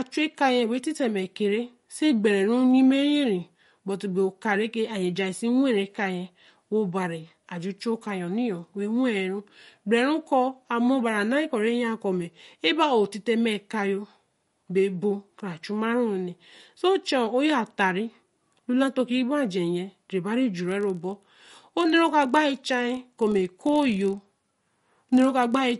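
A speech recording, most likely passed through MP3 compression at a low bitrate, around 48 kbps by the sound of it. The encoder runs short of bits and discards the treble, so nothing remains above 11.2 kHz, and the plainly audible codec damage gives a watery, swirly texture. From 20.62 s to the end, a block size mismatch (padded) appears: one stage writes shorter blocks than the next reads, which fits a 1024-sample read, and zeros fill each gap. The result is a 43.1 Hz buzz and playback about 0.1 percent slow.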